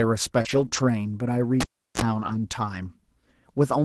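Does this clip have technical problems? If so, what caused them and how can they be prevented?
Yes. Three kinds of fault are audible in this clip of speech carried over a WebRTC call path using Opus at 24 kbps, which limits the audio to about 12 kHz.

Short concealed packet loss occurs from 0.41 to 0.47 s and again from 0.69 to 0.73 s. Audio for roughly 40 ms and then 20 ms failed to reach the decoder in time. The receiver filled each hole by extending the preceding sound, voiced material from its pitch and unvoiced material as shaped noise, before blending back into real audio. It comes across as a brief smear or wobble. A jitter buffer with a little more headroom, on a steadier network path, would let these packets arrive before their playout deadline.

A lost packet rebuilt from error correction affects 0.45 to 0.67 s, 0.73 to 0.79 s and 2.13 to 2.35 s. The two longer stretches fit about six 20 ms packets each, and the short one fits two. 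Each lost packet was recovered from the low-bitrate redundant copy that Opus in-band error correction embeds in the following packet, so there is no gap. Those frames sound rougher and noisier than the surrounding speech. Reducing packet loss on the link is the fix, because a better network means the decoder rarely has to fall back on these coarse copies.

A cable pulled and plugged in runs from 1.61 to 2.02 s. It starts with a pop, followed by about 0.36 s of near silence. Then comes a burst of 60 Hz mains buzz lasting roughly 36 ms while only the plug tip made contact, and a second pop as the signal returned. The live connection was broken and remade during recording. Securing the cable, or muting the input before touching any connector, avoids this.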